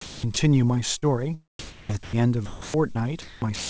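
From 0.01 to 0.36 s the speech is chopped by the voice detector, most likely as the sender's detector toggled transmission on and off. About 240 ms of the stretch is replaced by comfort noise, so syllable edges break up.

At 0.98 to 1.04 s there is a short concealed packet loss: about 40 ms of audio arrived too late to decode, and the receiver extrapolated from the preceding sound for 39 ms before crossfading back. It is heard as a brief smear or wobble in the speech.

Between 1.59 and 2.16 s the background is replaced by comfort noise, likely because discontinuous transmission halted sending during a pause. For roughly 400 ms the detailed ambience gives way to a steady, featureless noise bed, smoother than the real background around it.

Within that stretch, from 2.03 to 2.13 s, speech is dropped by the voice detector, which most likely classed the sound as background and stopped transmitting. 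About 80 ms of sound is lost under 100 ms of synthetic noise before the detector re-triggers and the speech resumes.

From 2.46 s to the end of the clip the speech is chopped by the voice detector again, the likely cause being repeated on/off switching at the sender. About 652 ms across this span is comfort noise, leaving holes and clipped word edges. Throughout, the band stops at 8 kHz, which fits a G.722 call path at 64 kbps.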